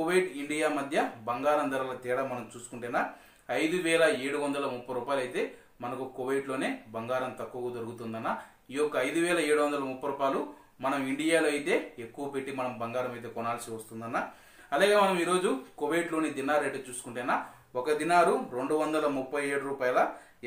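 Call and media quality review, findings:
No faults found on review. Nothing to escalate for this clip.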